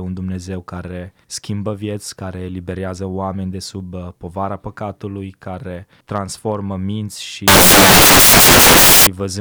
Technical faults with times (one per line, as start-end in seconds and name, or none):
7.48-9.07 samples built from the wrong bytes